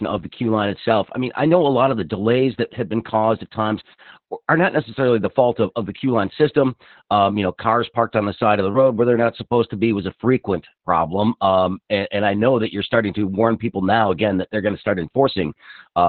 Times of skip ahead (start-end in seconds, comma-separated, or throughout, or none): none